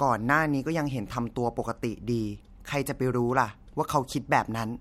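Listening to the speech revealed nothing that stood out.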